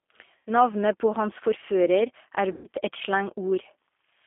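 Throughout, the speech carries the sound of the G.729 codec, here the low-complexity G.729A variant at 8 kbit/s. It resynthesises each 10 ms frame from a short-term vocal tract filter, a long-term pitch predictor and a handful of pulses, so the result has a slightly rough, synthetic texture, with plainly audible codec damage. The line band runs from about 250 Hz to 3.5 kHz, giving the thin telephone character.

From 0.37 to 0.50 s there is VoIP packet loss concealed by the speech codec. The decoder repeats its last pitch and filter state at falling gain, so the sound smears into a buzzy tone or coloured noise that fades, pointing to roughly 90 ms of missing audio. The same fault returns from 2.52 to 2.67 s, this time longer, consistent with about 120 ms lost. In both cases the decoder's state has to rebuild, so the speech stays weak and distorted briefly after each gap.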